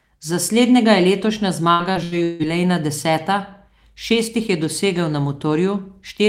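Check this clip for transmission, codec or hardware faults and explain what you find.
One transmission fault is present. From 1.71 to 2.42 s there is repeated packet loss (robotic sound): four gaps, the longest 159 ms, each patched by extending the preceding audio. About half that stretch is filled-in sound, so the speech turns choppy and robotic.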